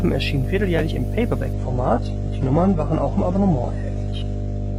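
A steady mains hum runs through the whole speech clip. It sits at 50 Hz, with some low harmonics above it. It is strong, nearly as loud as the speech itself. Power-line current is leaking into the signal path, most likely through a ground loop or from a nearby transformer. It sounds like a constant low drone under everything.

At 1.53 s, right after "erschienen vierteljährlich im", the sound changes abruptly. This is an adaptive stream at a lower bitrate. The connection slowed, so the player switched to a cheaper version of the stream. There is no gap at the switch. Nothing above 11 kHz survives after it, so the speech turns dull. Codec artefacts rise. This fits a drop from a mid-rate AAC stream to a very low-rate HE-AAC one. It lasts to the end.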